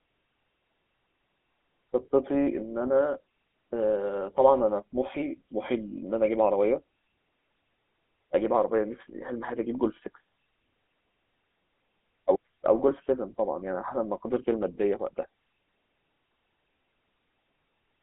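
Throughout the speech a buzzy, gravelly roughness is plainly audible, with nothing above about 3.8 kHz and a thin 250 Hz to 3.4 kHz line band. This is the GSM full-rate codec, fitting its 13 kbps rate, which rebuilds the voice from coarse pulse-driven excitation.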